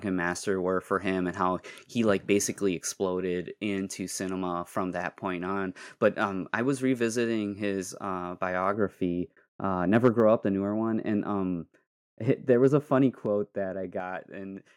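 From 8.74 s to 14.00 s, just after "was revisiting his uh", this speech clip turns dull and muffled. The treble falls away smoothly, leaving the top end about 11 dB down at 10 kHz relative to 1 kHz. That gentle, continuous slope is the signature of de-emphasis applied wrongly: a treble cut meant to reverse pre-emphasis was applied to audio that never had that boost, or was applied a second time, so the high frequencies end up attenuated instead of restored. Inside that stretch there are two brief harsh, crackly moments on loud syllables, from 10.04 s to 10.09 s and again from 12.64 s to 12.67 s. The first is the rougher of the two: its peaks are flattened around one sample in twenty, against a few percent in the second. The likely cause is microphone overload, with the input driven about 3 dB past the converter's ceiling in the first case and about 1 dB in the second, so the waveform tops are sliced off. 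Shortly after each, the whole level, voice and background together, drops abruptly: by about 2 dB at 10.2 s and by about 5 dB at 13.26 s. This most likely reflects the microphone volume being stepped down, with the call software reacting to the distorted peaks by cutting the device's input gain in a single jump rather than easing it down.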